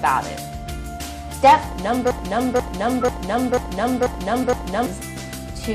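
A stalled player or stream likely kept resending its last fragment. From 2.11 to 4.86 s, a broken-record loop repeats one 0.49 s piece six times.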